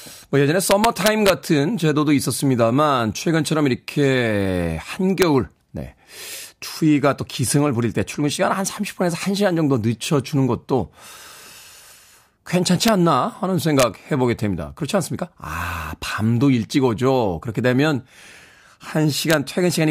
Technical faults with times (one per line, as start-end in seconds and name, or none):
0.71-1.30 integer overflow
5.22 integer overflow
12.88 integer overflow
13.80-13.83 integer overflow
19.30-19.34 integer overflow